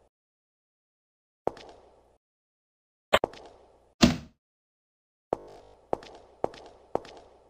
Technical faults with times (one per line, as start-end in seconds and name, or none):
5.40-5.74 robotic sound from repeated short buffers